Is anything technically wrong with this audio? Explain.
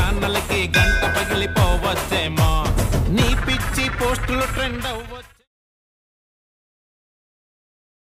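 No, nothing is technically wrong with this audio.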